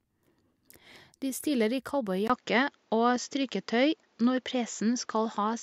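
At 2.28 s, just after "stiller i", the speech drops out for about 20 ms and returns with a different character, which points to an input switched to a poorer device, likely a change of microphone or a headset profile. From there to the end, nothing is present above 7.6 kHz, so the sound turns duller and boxier. The level shifts by around 5 dB, and a faint new noise floor sits well below the speech.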